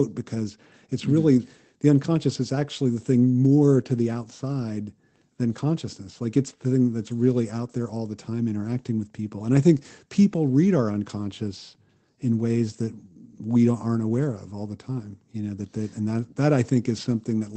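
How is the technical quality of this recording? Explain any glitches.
No glitches or dropouts are audible anywhere in this recording.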